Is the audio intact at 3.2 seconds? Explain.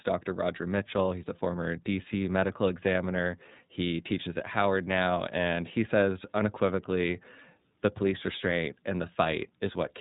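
No. At 3.2 s the speech carries iLBC codec damage, present across the whole clip. The codec rebuilds each frame's excitation independently, here in blocks that fit 30 ms frames at a lower iLBC rate, so the speech sounds clear but plainly rough and synthetic. On a spectrogram nothing appears above 3.8 kHz, a flat empty ceiling.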